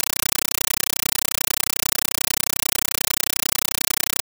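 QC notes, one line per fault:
throughout: compressed stream played as audio. A Dolby Digital bitstream is played as raw samples instead of being decoded, so very loud chattering static replaces the speech. It consists of 8 ms noise bursts, 31.25 per second, with silent padding between them. On the waveform these are regular blocks. On the spectrogram they are regular broadband stripes.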